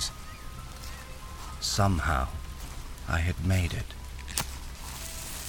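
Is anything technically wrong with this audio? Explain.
No, nothing is technically wrong.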